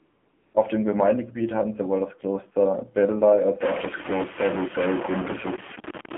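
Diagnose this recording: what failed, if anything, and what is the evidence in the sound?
The codec stage failed first: the call went through AMR narrowband mobile coding at a low rate, so the speech is band-limited to roughly 200 Hz to 3.4 kHz with nothing above 4 kHz. The codec damage is plainly audible throughout. Vowels sound buzzy and synthetic because the vocal-tract model is fed only a few excitation pulses per subframe. The degree of buzz fits a low mode around 7.4 kbps rather than the higher AMR-NB rates.

At the start, from 0 to 0.54 s, there is AMR comfort noise. The sending phone's voice activity detection treated the opening as silence and sent no speech frames for about 535 ms. The receiver filled that gap with synthetic noise built from a coarse level and spectrum description. The result is a smooth, steady hiss in place of the real background, which switches over abruptly to coded speech when transmission resumes.

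From 3.61 s to the end at 6.18 s, the sound becomes distorted, with noise that persists into the quieter gaps. The likely cause is a stuck bit, probably in the converter or a data line. One sample bit held at a fixed value shifts roughly half the samples by that bit's weight, following the waveform's sign and level.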